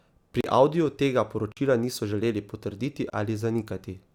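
Blocks of digital silence hit at 0.41 s, at 1.52 s just before "niso želeli potrditi", and at 3.10 s after it. Gaps last 23 to 46 ms. Unfilled output buffers fit 1024 or 2048 samples. Each sounds like a short hole.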